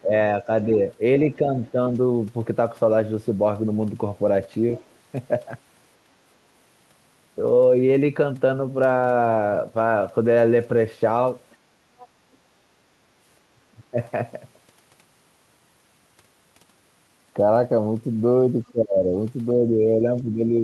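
From 0.0 to 0.8 s there is speech suppressed in double talk: the voice dips by roughly 15 dB across about a third of a second, likely because the echo canceller could not separate this talker from loudspeaker echo while the far end spoke, and turned both down.

From 1.36 to 1.78 s the same suppression returns, shallower at around 10 dB. Inside it, at 1.64 to 1.71 s, there is the other side's voice leaking through: a faint scrap, roughly 30 dB below the speech, likely residual loudspeaker echo the canceller failed to remove from the microphone.

At 4.77 to 4.95 s the other side's voice leaks through again, around 25 dB down, as a brief fragment behind the talker.

From 11.5 to 12.36 s a longer stretch of the other side's voice leaks through at a similar level of about 25 dB below the speech. This is likely uncancelled echo of the far end from this side's loudspeaker playback.

From 13.55 to 13.97 s the worst speech suppression in double talk hits. 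The voice drops by roughly 30 dB for about a fifth of a second, likely because the canceller clamped down hard while both sides talked.

From 18.71 s to the end the speech is suppressed once more by around 15 dB, heard as a duck that likely comes from the canceller reacting to far-end speech overlapping the talker.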